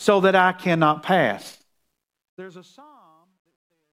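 After "that I cannot pass", from 1.6 s, truncation distortion on a fade: the undithered fade, fitting a 12-bit stage, turns gritty, worst from 2.71 s, unlike a clean fade.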